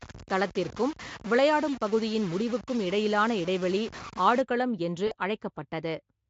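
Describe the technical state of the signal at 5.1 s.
VoIP packet loss concealed by the speech codec occurs from 5.07 to 5.14 s. The decoder extrapolates 40 ms, consistent with two lost frames, with falling gain, leaving a brief buzzy or noisy, fading smear.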